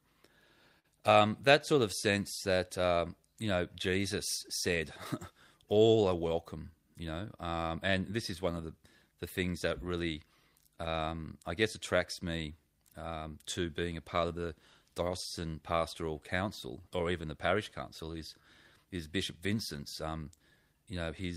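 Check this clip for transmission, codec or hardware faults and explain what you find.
Three timing faults affect this speech clip.

Clock drift between sender and receiver runs throughout. The sender's clock is about 3% slow, so its audio arrives slightly behind the receiver's playback rate and the jitter buffer keeps draining. That steady deficit drives the repeated timing corrections. Unlike a single network delay, it never settles: the receiver has to compensate for the whole clip.

A short stall from a late packet occurs from 0.79 to 0.86 s, just before "um that". The buffer ran empty, and the receiver held the last sound for about 50 ms until the packet arrived. Nothing is lost, but that moment is briefly frozen. It is a single held instant with no skip, which distinguishes it from a dropout or a glitch that cuts out audio.

Repeated timing corrections follow from 1.73 to 21.23 s, starting after "um that". 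Here the receiver repeats short pieces to keep up with the slower sender. The result plays at about 97% speed and adds roughly 0.7 s overall. The edits all run in one direction at uneven intervals, and each is small. This differs from the isolated stall because the small hiccups are spread across the whole stretch.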